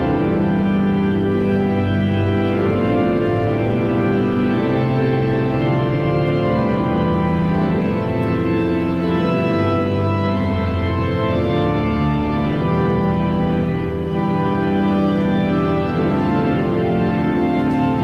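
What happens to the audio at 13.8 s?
Nothing goes wrong at 13.8 s; the audio plays through that moment intact, with no dropout, click, glitch or other fault.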